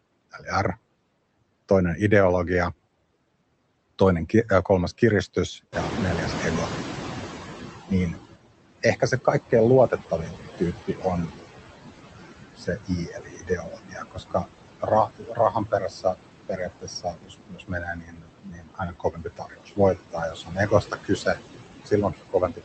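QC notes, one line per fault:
Throughout, noise suppressor artifacts: the suppressor pulls the background down by about 19 dB, band by band and frame by frame, so the residual noise dips in pauses and swells under the talker.
5.72–8.24 s, noise suppressor catching up: the room noise jumps by about 17 dB near 5.5 s, and the suppressor's noise estimate trails it. The noise passes with little reduction at first, then sinks by about 16 dB over roughly 2.5 s as the estimate adapts.
8.83–9.27 s, 9.88–10.37 s, 10.87–11.05 s, 12.56–14.46 s, 14.8–16.17 s, 16.48–21.39 s and 21.86 s to the end, speech cut by the noise suppressor: with the louder background sitting only about 10 dB under the speech, the suppressor mistakes speech for noise and drops it by about 11 to 22 dB. The early cuts last a small fraction of a second, while from 12.56 s onward several seconds are affected, so consonants and word endings sound swallowed or faint. 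The call path's 8 kHz audio bandwidth cuts off the highs above it.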